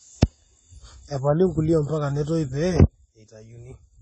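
AAC compression runs throughout the speech: nothing reaches above 9.9 kHz, so it sounds dull and smeared, with a warbling, fizzy edge. That likely comes from AAC-LC starved of bits, which fits about 24 kbps, so the top band is cut and the rest coarsely quantised.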